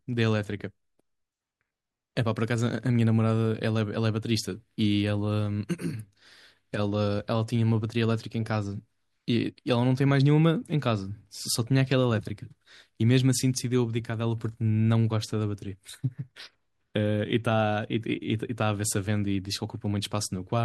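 From 0.13 s to 20.05 s, a click recurs every 1.11 s, about twenty in all. These are clock drift buffer slips. Two mismatched clocks, likely off by around 150 ppm, force a handful of samples to be dropped or repeated each time.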